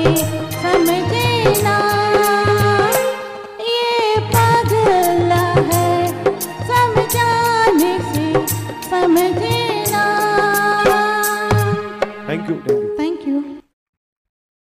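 From 1.79 to 4.40 s, GSM signalling bursts: a phone's rectified radio pulses give galloping ticks and short 217 Hz buzzes, not a steady continuous drone.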